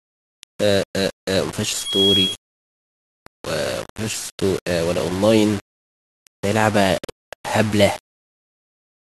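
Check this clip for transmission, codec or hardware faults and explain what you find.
Two faults are audible in this speech recording.

Low bit depth without dither runs throughout: gritty, signal-following distortion about 15 dB below the speech, likely from rounding to roughly 5 bits without dither.

Loudspeaker feedback squeal appears from 1.74 to 2.54 s: a 3.3 kHz loop tone swells over a few tenths of a second until it rises above the speech.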